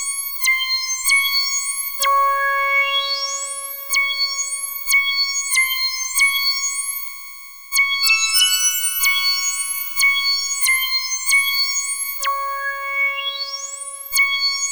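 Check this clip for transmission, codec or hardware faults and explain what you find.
Nothing in the clip points to a transmission, codec or hardware fault.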